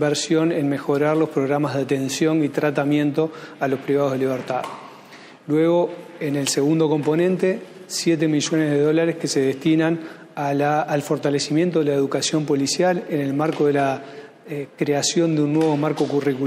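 No technical faults are audible anywhere in the audio.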